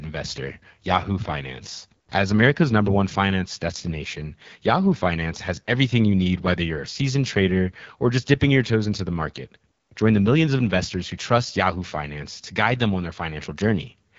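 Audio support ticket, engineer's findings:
AMR wideband (HD Voice) codec, whole clip: rough, raspy speech, plainly audible. Low-rate pulse model, which fits the 8.85 kbit/s mode. Spectrogram: hard ceiling near 7.4 kHz, smeared harmonics below 6.4 kHz, featureless noise-filled band from 6.4 to 7 kHz.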